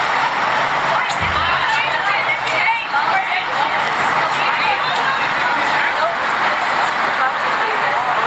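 Gain pumping runs through the whole recording. The input gain was likely set far too high, so a fast limiter or compressor clamps down on every loud sound and releases in the gaps between them. The level swings by roughly 10 dB. Loud and soft moments sit unnaturally close together, leaving everything squashed. Across the call chain, nothing is heard above 8 kHz.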